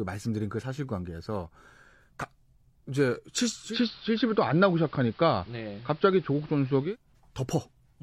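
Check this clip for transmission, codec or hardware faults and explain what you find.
One fault: digital radio blending to analogue, 3.62 to 6.97 s. The receiver lost the digital stream and cross-faded over 183 ms to the AM broadcast. The spectrogram shows faint hiss, and the waveform's level shifts about 2 dB.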